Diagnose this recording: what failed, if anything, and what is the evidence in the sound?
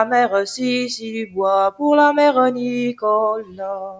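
The call-processing stage left a speech-tuned noise suppressor running on audio that isn't speech, so this is a noise suppressor applied to music or sounds. It treats sustained tones, ambience and decay as background to strip out, and its gain keeps moving by around 10 dB across the whole recording. Onsets pass through fairly intact while anything held or fading is pulled down, so the sound pumps and thins rather than holding a steady level.

The same suppressor produces distinct episodes of sound cut by the noise suppressor, where its gain clamps down harder on material it misreads as noise. From 0.98 to 1.38 s the level sinks by up to about 15 dB, and from 3.4 to 3.61 s by about 15 dB again. From 3.79 s to the end at 3.99 s it drops by about 13 dB. In each case it is the held or fading sound that sinks in level.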